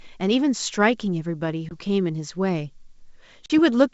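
At 1.69 to 1.73 s, and again at 3.46 to 3.51 s, the speech drops into hard-edged silence. This is packet loss on an ADPCM call, about 20 ms missing and then about 40 ms, which fits a couple and then a few lost packets. A plain dropout would resume cleanly. Here the G.722 decoder's predictor and step size have drifted from the sender's, so each return comes back slightly distorted before settling.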